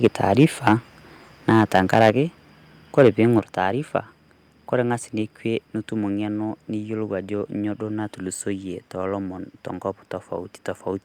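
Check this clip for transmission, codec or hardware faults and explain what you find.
Two faults stand out: repeated microphone overload, and two sudden steps down in microphone volume.

Microphone overload occurs from 0.03 to 0.73 s, 1.49 to 2.1 s and 2.98 to 3.09 s. Peaks run about 4 to 7 dB past the limit. The likely cause is input gain set too high, so the converter flattens their tops. Loud syllables sound harsh and crackly.

Microphone volume steps down at 2.1 s by about 4 dB, then at 3.4 s by about 6 dB. Voice and background drop together, abruptly. The first step comes right after a distorted peak. Call software likely cut the input gain in response.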